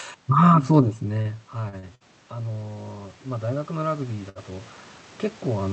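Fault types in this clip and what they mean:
automatic gain rising: The gain control responds to the input dropping by about 20 dB around 1 s, when the talker moves away, and raises its gain by about 10 dB between 0.77 and 4.76 s. Voice and room noise swell gradually together.
short stall from a late packet: Packets arrive late, the jitter buffer empties, and the last sound is held until playback resumes where it left off. This happens at 1.21, 1.69, 1.79 and 4.29 s, for 37, 40, 42 and 62 ms, with nothing lost.
burst of packet loss: From 1.95 to 2.03 s, a run of audio never arrives in time. About 54 ms is filled by continuing the previous sound as a fading buzz or hiss, then playback jumps ahead, skipping roughly 60 ms.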